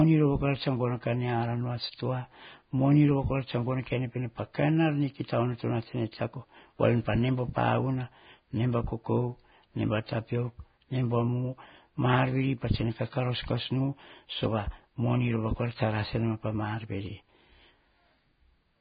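Vorbis compression runs through the whole speech clip, with heavy damage. Nothing is heard above about 4.9 kHz, and the remaining treble sounds hissy and grainy because coarse quantisation has turned fine detail into noise, likely from Vorbis encoding at a very low bitrate near 16 kbps.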